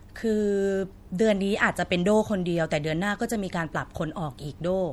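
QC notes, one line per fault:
Throughout, MP3 compression: the sound has a watery, swirling quality as weak frequency components drop in and out from frame to frame. Sibilant s sounds carry a metallic chirp, and consonant onsets are smeared rather than crisp. The damage is plainly audible across the speech and most likely comes from MP3 encoding at a low bitrate, consistent with something near 64 kbps.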